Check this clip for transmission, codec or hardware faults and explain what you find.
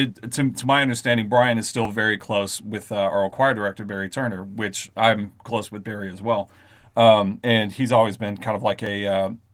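There are two brief glitches of the same kind, each a jump in the speech. At 1.85 s, just before "very close with uh", and again at 8.86 s, right after "and he's always been", the audio skips ahead by a few milliseconds with no gap. The likely cause is a dropped buffer (overrun): the software didn't collect a block of samples before the hardware overwrote it, so the two sides got spliced straight together. The Opus voice compression underneath does only light damage.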